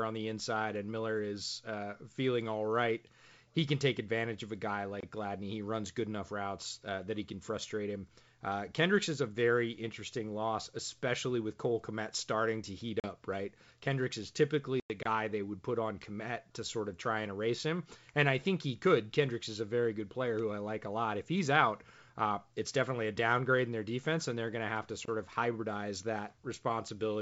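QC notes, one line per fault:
5.00, 15.03 and 25.05 s: gap between chunks. A hard-edged hole of about 25 ms recurs every 10 s, after "advantage of a guy" and between "going to have to" and "of hybridize". Silence inserted at each chunk join interrupts the sound without removing any.
13.00 and 14.80 s: packet loss on an ADPCM call. Holes of 40 ms, then 100 ms after "is typically", point to a couple and then several lost packets. The decoder's predictor and step size drift from the sender's, so speech returns with brief distortion.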